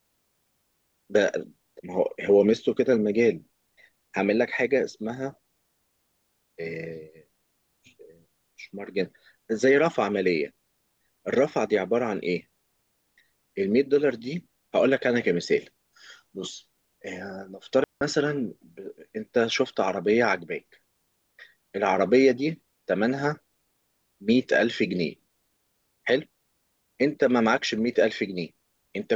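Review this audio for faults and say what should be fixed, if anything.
At 17.84 s the speech cuts to near silence and returns at 18.01 s. The gap lasts about 174 ms. This is a digital wireless dropout. The radio link lost too much data for the receiver to rebuild the signal. So the receiver muted the output with a very short fade. The hole is clean. There is no noise burst before or after it. To prevent it, keep a clear line of sight between transmitter and receiver and stay within range.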